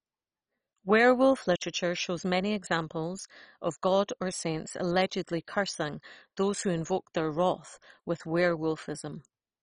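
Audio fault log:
throughout, MP2 compression: the speech was likely squeezed through MPEG Layer II at a very low rate, which fits 32 kbps, starving its sub-bands of bits so nothing survives above about 10.4 kHz, leaving a dull sound with heavy gurgling, granular distortion as remaining bands flicker.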